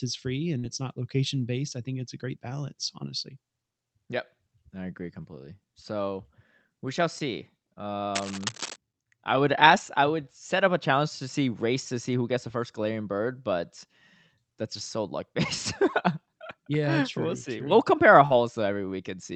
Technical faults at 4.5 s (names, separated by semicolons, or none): none